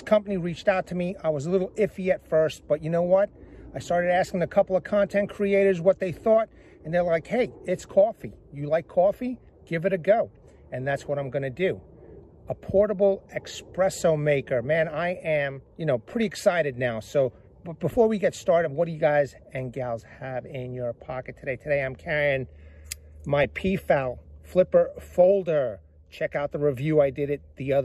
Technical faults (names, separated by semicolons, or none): MP2 compression; DAB burbling